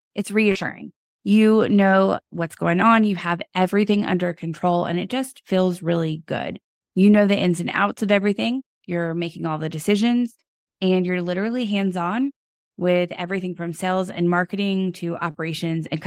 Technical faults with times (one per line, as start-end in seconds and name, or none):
0.51-0.58 short concealed packet loss
15.31-15.37 short concealed packet loss